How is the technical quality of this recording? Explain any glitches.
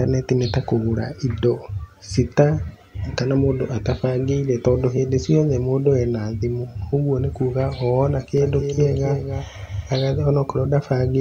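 The recording has one glitch, a doubled audio track from 8.38 to 10.02 s. The same speech is mixed in twice: a second, full-band copy trails the original by roughly 300 ms at about 5 dB lower. It is likely the result of the signal being captured again through a slower path, or an edit leaving two copies out of step. The copy has no decay or room colour, and it starts and stops abruptly.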